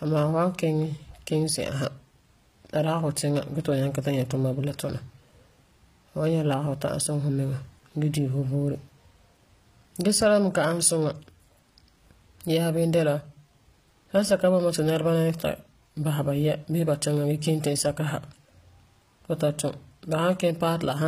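Speech runs the full clip with a bright but synthetic-sounding top end: s sounds come out gritty and lisping, with a metallic sheen that doesn't match the body of the speech below it, and nothing reaches past about 15.5 kHz. This is likely HE-AAC compression. The encoder keeps only the lower spectrum and regenerates the treble by copying lower bands upward under a coarse envelope, so the upper harmonics don't line up. The damage is plainly audible and fits a low bitrate around 24 kbps, consistent with the v2 profile.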